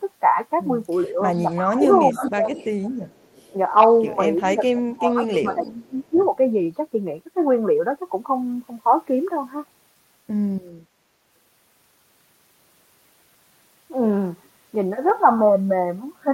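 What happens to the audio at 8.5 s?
Nothing goes wrong at 8.5 s: the speech carries straight through that moment with no dropout, click, distortion or other break in the sound.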